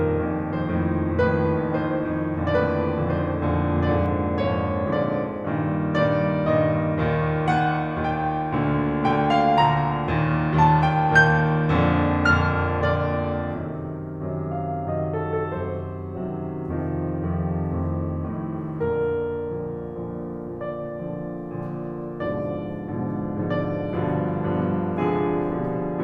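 From the start to 4.06 s the music carries a doubled audio track. A second full-band copy trails about one and a half seconds behind, roughly 5 dB quieter. It has no decay or room colour. It stops abruptly at 4.06 s. A slower second capture path is the likely cause.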